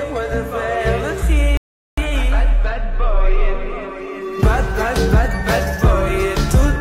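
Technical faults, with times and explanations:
1.57 to 1.98 s, playback stall: the sound cuts off mid-flow and the output stays silent for about 0.4 s before resuming. This most likely comes from the player running short of data or its thread being blocked, so nothing reached the output until it recovered.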